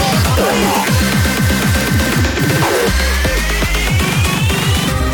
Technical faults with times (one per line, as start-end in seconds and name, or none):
2.25-2.38 AAC frame loss with concealment